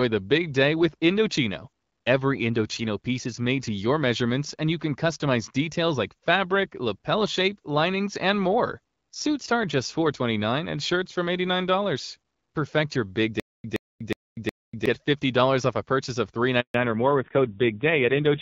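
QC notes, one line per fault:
13.40 to 14.86 s, stutter with silent gaps. A 122 ms fragment of speech plays, then about 243 ms of dead digital silence follows. The same fragment returns four times at a steady 364 ms pace. The likely cause is a stalled player or stream that replays its last buffered piece on each retry and then runs dry. The even rhythm is that retry cycle. The speech that belonged in this stretch never plays.
16.60 to 16.74 s, handover gap. The voice dies away within a few tens of milliseconds, and then nothing is heard for 140 ms. That pattern fits a call being passed from one network to another, with no speech frames arriving during the switch. Whatever was said in those 140 ms is gone. Sound resumes only once the new link is up.
16.74 s to the end, fallback to narrowband. Right after the gap, everything above 4 kHz disappears. Sibilants lose their edge, and the voice turns duller and rougher. 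Before this point the HD Voice wideband coding is clean, with only light damage at 12.65 kbit/s. The sudden 4 kHz ceiling points to the call dropping to an older narrowband codec, probably AMR-NB at a low rate such as 5.9 kbit/s, which adds the coarse, raspy texture.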